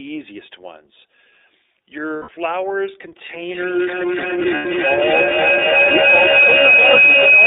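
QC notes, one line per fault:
Throughout, iLBC codec: the speech is squeezed into a telephone band of roughly 300 Hz to 3.7 kHz, so nothing above that comes through. The coding damage is plainly audible. Each 30 ms frame is coded on its own, at a rate that fits 13.33 kbps. That leaves the voice clear but rough and slightly synthetic, with an artificial edge. Thinness and dullness come from the missing top end.
2.16 to 2.29 s and 4.56 to 4.66 s, lost iLBC frames: two short dropouts, 120 ms and then 90 ms, which fits four and then three lost frames. In each gap the decoder repeats the last pitch cycle mixed with noise, and it sounds like a held, faintly buzzy vowel. Frames stand alone in this codec, so the speech recovers almost straight after each gap.
3.28 s to the end, feedback howl: a tone near 3 kHz builds up and keeps going until the clip ends. Its peak is about 8 dB above the speech. 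The trip time around the loop is roughly 300 ms. Two devices sharing the call in one room feed each other. Each pass adds gain and narrows the sound toward the pitch the loop favours.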